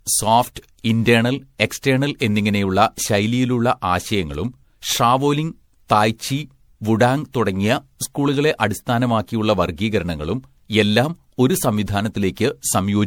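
Speech, with generation loss throughout. It sounds swirly, smeared and hollow, and consonant attacks blur. The likely cause is repeated MP3 coding, around seven passes, each requantising on a shifted frame grid. That is worse than 96 kbit/s alone would explain. Nothing remains above 20.5 kHz.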